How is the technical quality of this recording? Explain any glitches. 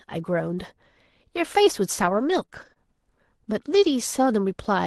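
The recording has one glitch, a brief cluster of dropouts. Its top end stops around 12 kHz, which fits a super-wideband call codec such as Opus near 24 kbps.

Between 2.01 and 3.91 s, scattered short gaps cause a few quick ticks and smeared hiccups. Roughly three lost or late packets, the longest about 30 ms, were patched by extending the preceding sound.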